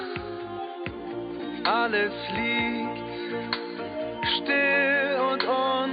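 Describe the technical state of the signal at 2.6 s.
At 2.6 s the signal is intact, with no audible dropout, distortion, noise burst or other technical fault at that moment.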